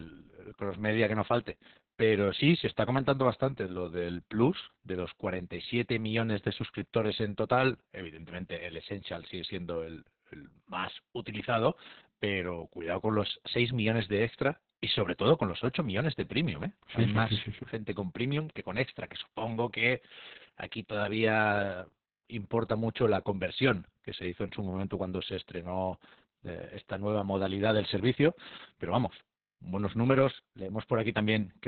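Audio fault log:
Throughout, Opus voice compression: the speech runs through the SILK coder in narrowband, with nothing above about 4.4 kHz, so it comes out muffled, hoarse and a bit robotic. That heavy, coarse-sounding excitation points to a bitrate around 6 kbps.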